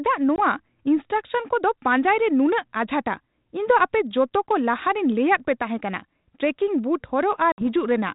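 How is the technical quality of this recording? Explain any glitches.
Two short dropouts mar the recording. The telephone-band coding sounds consistent with G.726 ADPCM at 32 kbit/s, with light coding grain.

Both glitches are packet loss on an ADPCM call. At 0.36 to 0.40 s, about one packet, roughly 20 ms, goes missing. At 7.52 to 7.63 s, about three packets, roughly 60 ms, vanish. Each gap is filled with hard-edged silence. The decoder's adaptive predictor and step size then disagree with the sender's. So the speech returns with brief distortion before settling.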